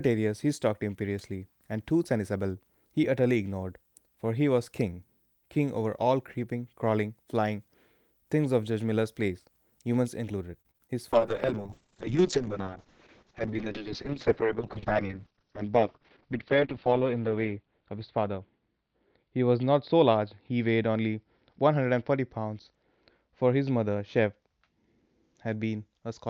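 Packets went missing repeatedly between 10.61 and 10.91 s in this speech recording. That is repeated packet loss: four separate gaps, the longest 35 ms, with the receiver patching each hole by extending the preceding sound. About 31% of that stretch is concealed, and the result is a choppy texture with small pieces of sound dropped out. From 11.13 s to the end, a call bitrate drop sets in. The connection's bandwidth estimate fell and the encoder was pushed to code far more coarsely, which fits a fall from around 40 kbps to about 6 kbps, held at its lowest for 5.8 s. The audible bandwidth shrinks from 20 kHz to 6 kHz, so everything after that point sounds muffled, rough and watery, with the crisp upper frequencies gone. Inside that degraded section, from 13.60 to 13.92 s, there is a jitter buffer speed-up. The receiver had built up more buffered audio than it targets and trimmed it by cutting out short pitch-period slices, removing a few tens of milliseconds in all. 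Over that third of a second the speech runs at about 110% speed with unchanged pitch, so the delivery sounds briefly hurried.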